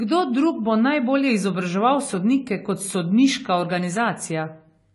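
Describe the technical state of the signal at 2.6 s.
At 2.6 s the speech carries likely AAC compression damage, present throughout. Nothing sounds above 11.4 kHz, and sparse coding leaves a dull, smeared, warbling texture, fitting about 32 kbps.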